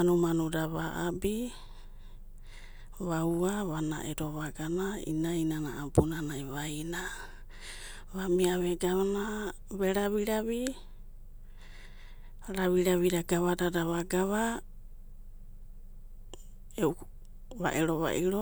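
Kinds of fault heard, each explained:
Nothing stood out on listening to this speech recording.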